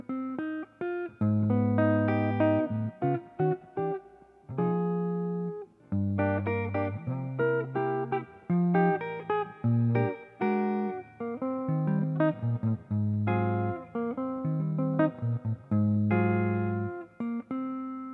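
No technical faults can be heard anywhere in the recording; the signal holds steady and continuous throughout.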